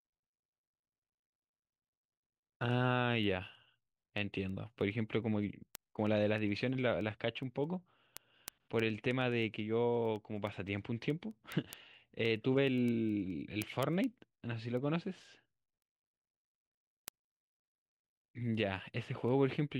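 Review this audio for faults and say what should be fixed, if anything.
A receiving device running on its own unlocked clock, roughly 200 ppm adrift, slips one sample about ten times a second, causing word clock ticks: sharp, uneven clicks through the speech from 0.19 to 19.71 s. Locking the receiver to the sender's clock, or adding a sample-rate converter at the input, would prevent this.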